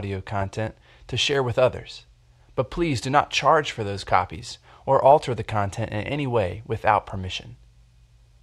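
A speech recording with no audible technical faults.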